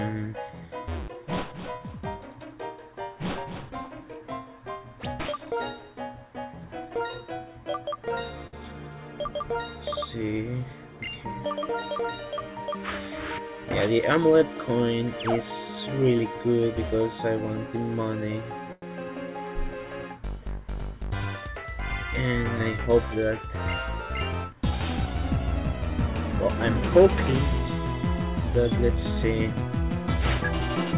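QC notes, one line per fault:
8.47–8.54 s and 18.72–18.83 s, short stall from a late packet: the sound hangs for about 57 ms and then 98 ms, with a faint buzzy hold before resuming. A late packet emptied the jitter buffer, so the receiver stretched the last sound, losing nothing but adding delay.
13.91–14.42 s, jitter buffer speed-up: the audio briefly rushes, running about 9% fast at unchanged pitch, so it sounds hurried. The buffer was overfull and the receiver trimmed short pitch-period slices repeatedly, cutting roughly 50 ms to reduce delay. Throughout, nothing above 4 kHz is heard, which fits a G.711 call codec.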